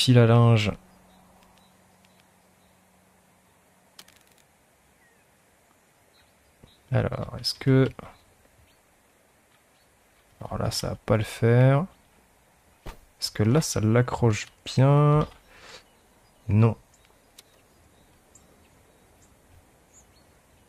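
No faults can be heard anywhere in this recording.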